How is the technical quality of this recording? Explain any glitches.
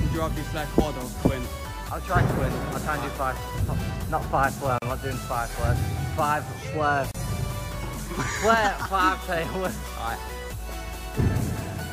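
The recording has two brief dropouts. At 4.78 s and 7.11 s there is a gap at a join of encoded pieces, lasting 36 ms and 32 ms. Separately encoded segments were spliced with their encoder delay and end padding left in, so continuous sound cuts to silence with slightly softened edges, then resumes exactly where it stopped.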